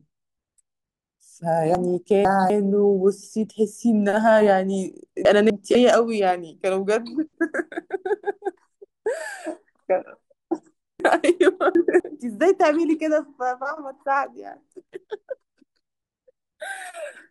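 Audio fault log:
1.75–2.5 s, chunks out of order: a 250 ms block plays two blocks late, so this 0.75 s stretch of speech comes out jumbled, with three hard joins.
5.25–5.75 s, chunks out of order: two adjacent 250 ms blocks swap places, giving a brief garbled moment.
11.0–12.0 s, chunks out of order: one 250 ms block arrives three blocks late, scrambling a full second of audio with three hard joins.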